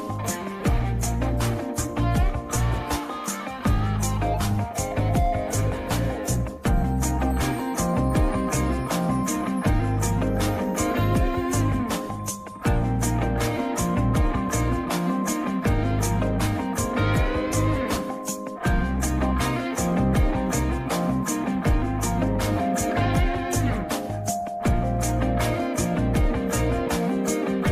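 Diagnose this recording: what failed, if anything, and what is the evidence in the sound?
Nothing failed at any stage; the recording holds no dropouts, clipping, distortion, glitches or timing faults.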